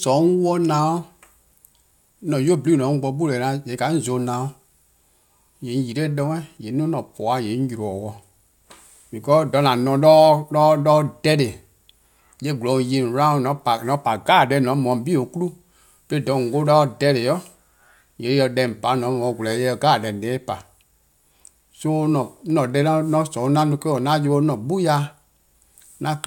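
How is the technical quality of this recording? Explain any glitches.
Nothing glitchy turns up anywhere in this speech recording, so there's really nothing here that needs explaining.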